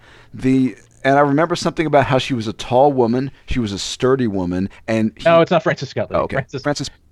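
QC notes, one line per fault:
4.63 to 7.12 s, time-stretched section: right after "she was a sturdy" the pace jumps to 1.55 times normal speed until the end while the pitch holds steady. This is likely from software squeezing the audio by dropping short slices, which makes it sound rushed.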